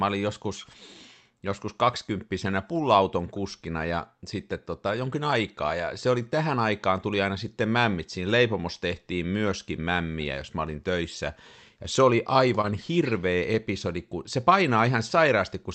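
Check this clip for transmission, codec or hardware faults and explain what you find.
Two kinds of packet-loss fault occur, both clustered between 12.6 and 13.6 s of this speech clip, which has passed through an Opus call path with content ending near 8 kHz.

Short concealed packet loss, 12.61–12.65 s, right after "se oli": about 20 ms never arrived, so the decoder extended the preceding sound and crossfaded back. It sounds like a brief smear.

Lost packet rebuilt from error correction, seven 20 ms frames starting at 12.63, 12.69, 12.73, 13.03, 13.41, 13.55 and 13.61 s, the last just before "kun se": each lost packet was replaced by the low-bitrate copy carried in the next one. There are no gaps, only short, rough and noisy moments. A spectrogram shows thin vertical bands with blurrier harmonics and more noise between them.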